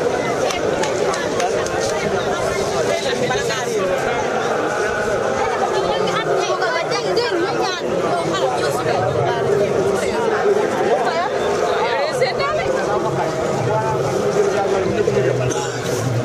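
No technical faults can be heard anywhere in the recording. Nothing in the audio stands out as a problem to flag.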